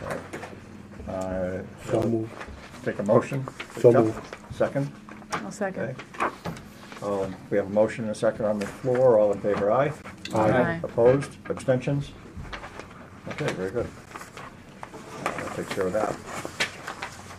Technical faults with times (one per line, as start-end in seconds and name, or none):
2.02 gap between stream segments
10.02 gap between stream segments
14.05 gap between stream segments
16.06 gap between stream segments